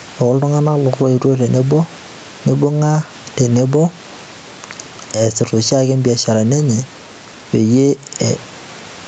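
Throughout the recording, the likely cause is input gain set far too high for the microphone, with a fast limiter or compressor repeatedly hauling it back down. The result is gain pumping. The level swings by roughly 10 dB, leaving the speech squashed and flattened in dynamics, over room noise sitting about 32 dB below the speech and cut off above 8 kHz by the call path.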